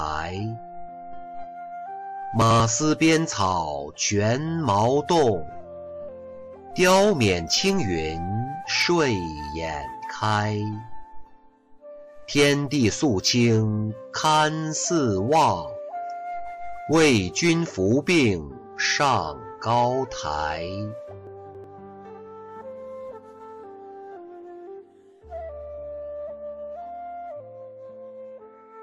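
Chunks out of order occur at 2.42 to 2.60 s and again at 21.27 to 21.64 s. In each case a slice of audio about 93 ms long was delivered late and plays after material that should follow it, so nothing is missing but the sequence is scrambled. The first span sounds like one slice swapped with its neighbour; the second, longer span suggests a slice arriving about three slices late. Each is heard as a brief jumbled stutter.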